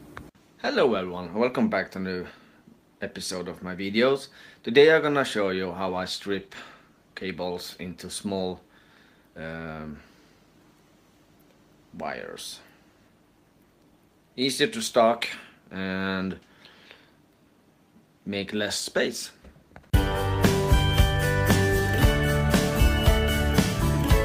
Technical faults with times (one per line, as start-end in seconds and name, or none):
5.84-7.33 call bitrate drop